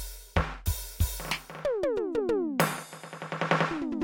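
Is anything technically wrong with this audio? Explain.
No, nothing technically wrong stood out on listening to this music clip.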